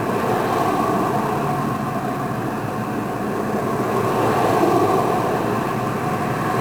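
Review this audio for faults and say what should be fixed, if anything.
1-bit DFPWM compression runs through the whole clip. Each sample is reduced to a single bit that nudges an adaptive level up or down, so the waveform is only approximated by a stepping slope. The heavy quantisation noise this leaves spreads across the entire band: the sound comes out fuzzy and crackly, with the treble buried under steady hiss. The density of that noise fits a stream of roughly 48 kbps. To prevent it, keep the source in PCM or a higher-resolution codec rather than a 1-bit format.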